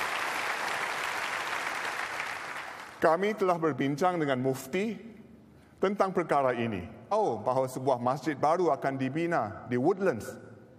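At 7.11 s there's a quick blip and the sound jumps abruptly ahead, as if a chunk had gone missing. That's most likely a stream segment skipped: one piece of the segmented stream failed to load, and the player moved straight on to the next one.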